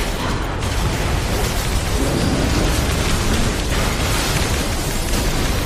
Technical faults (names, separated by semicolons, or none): MP3 compression